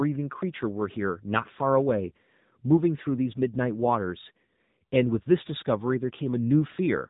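From start to finish the speech carries AMR narrowband mobile codec damage, plainly audible. Everything above 4 kHz is gone, but unlike simple band-limiting the voice also turns buzzy and synthetic, because each 20 ms frame is rebuilt from a vocal-tract model excited by sparse pulses rather than from the waveform itself. That coarse, reedy texture fits a low AMR-NB mode around 7.95 kbps.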